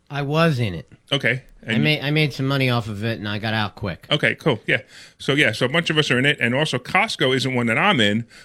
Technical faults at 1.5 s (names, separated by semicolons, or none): bit error spike